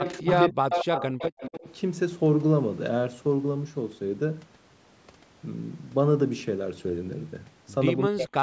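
Speech with two call faults near the start and one at the end. From 0.00 to 0.36 s and again from 0.70 to 1.75 s there is an echo leak: a second copy of the speech trails the first by about 230 ms, around 10 dB down in the first stretch and only about 5 dB down in the second. A loudspeaker's echo canceller on one side likely failed to remove its own output. Unlike room reverberation, which smears into a smooth tail, this is a distinct repeat at a fixed lag. The speech is also suppressed in double talk at 0.18 to 0.27 s (dropping by about 25 dB), at 0.46 to 0.76 s, and from 8.08 s to the end (both dropping by about 40 dB). These dips likely come from the echo canceller turning the talker down while both sides overlapped. They differ from packet-loss gaps because they coincide with the other side's sound.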